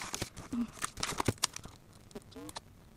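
From start to finish, a block size mismatch (truncated) discards the tail of every block, leaving a 188 Hz buzz and audio running 1.88 times fast at near-normal pitch, which fits 256-sample reads. The waveform shows jumps every 5.3 ms, and the spectrogram shows regular vertical striations.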